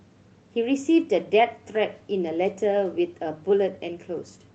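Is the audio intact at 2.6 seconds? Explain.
Yes, the audio is intact at 2.6 seconds, with no dropout, glitch or other fault at that moment.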